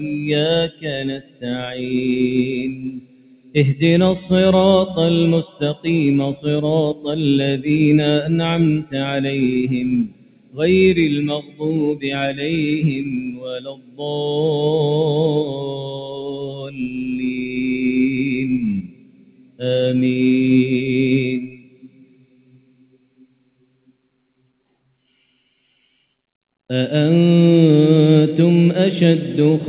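The audio has passed through a narrowband call path, with nothing above 4 kHz, which fits G.711 mu-law at 64 kbps. A speech-oriented noise suppressor was left running on non-speech material throughout, treating sustained tones, ambience and reverberant tails as noise and pulling them down while transients pass. The gain moves by around 20 dB over the clip, so the level pumps and the texture thins and flutters as held material fades under the suppressor and recovers on each new attack.

The sound cut by the noise suppressor shows up as distinct dips at 0.69–3.55 s (down by about 16 dB), 5.48–7.05 s (about 13 dB), 10.05–12.04 s (about 16 dB), 13.25–14.02 s (about 16 dB), 15.48–17.57 s (about 12 dB), 18.82–19.62 s (about 16 dB) and 21.4–25.62 s (about 16 dB). Within each window the sustained or decaying portions sink or their tails are truncated while onsets survive. The longest stretch, from 21.4 s, is turned down for roughly three seconds in total.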